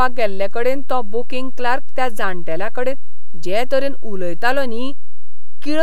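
A speech recording with a DC offset running the whole way through. The waveform sits shifted off the zero line by a constant of about -9 dBFS, which is a big shift. You won't hear it as such, but it eats a good chunk of headroom on one side, so peaks hit the ceiling sooner, and it shows up as steady energy right at the bottom of the spectrum. A high-pass or DC removal pass would pull it back to centre.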